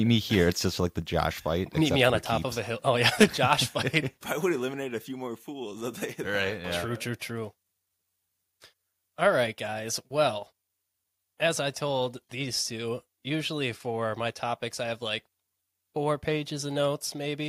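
A speech clip in which the level drops suddenly three times, by about 4 dB at 1.02 s just after "just like the", again by about 4 dB at 3.24 s, and by about 1 dB at 9.51 s. Voice and background fall together, which points to a microphone volume stepped down, likely the call software lowering the device's input gain in one step. Just before the second drop, from 3.21 to 3.24 s, a peak turns harsh and crackly with its top flattened. This is microphone overload, likely from an input volume set so high that the peak ran about 7 dB past the converter's limit, clipping a sizeable share of the samples there.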